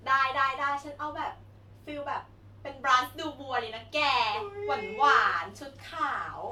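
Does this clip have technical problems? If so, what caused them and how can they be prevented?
No, nothing in this speech clip points to a technical problem, so there's no cause to track down and nothing that needs preventing.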